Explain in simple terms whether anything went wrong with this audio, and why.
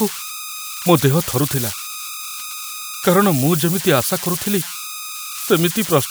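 Two things went wrong. Throughout the speech there are converter idle tones: a whistle around 1.5 kHz, a high tone rather than a low mains hum. At about 5.11 s, compressed frames were skipped. Roughly one 26.1 ms frame is lost, so the speech jumps ahead rather than pausing in a silent gap.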